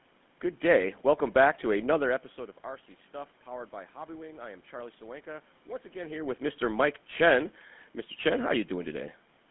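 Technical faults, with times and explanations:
Throughout, GSM full-rate codec: the speech was coded by modelling the vocal tract and exciting it with sparse, regularly spaced pulses, consistent with a 13 kbps stream, so it comes through confined to about 150 Hz to 3.5 kHz, with a plainly audible buzzy, gravelly roughness.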